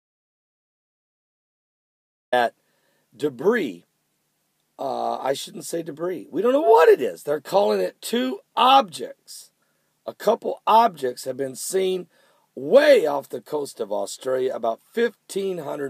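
The input feed was likely lost before this clip begins, through a disconnected device, a broken link or an accidental mute, so the recorder kept writing silence. The result is an audio dropout to silence already under way at 0.00 s and lasting until 2.32 s: total silence with no room tone. Then the sound arrives abruptly, already in progress, and anything before that point is missing.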